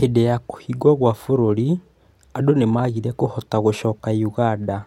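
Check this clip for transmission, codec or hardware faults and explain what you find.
Nothing audible in the speech points to a transmission, codec or hardware problem.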